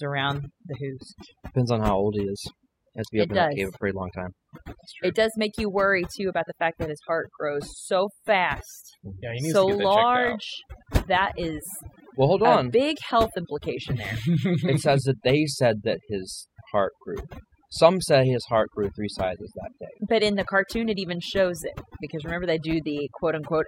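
Overdone noise removal runs throughout the speech, gating bands near the noise floor, leaving twinkling specks that appear as scattered isolated dots on a spectrogram.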